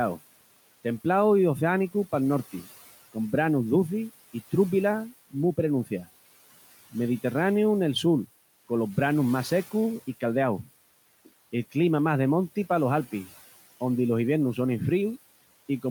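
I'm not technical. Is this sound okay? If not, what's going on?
No. Noise suppressor artifacts run through the whole recording: a cleanup filter pushes the room's background noise down whenever nobody is talking, then lets it creep back up under the speech. Ordinary room noise would stay at one steady level instead of rising and falling with the talking.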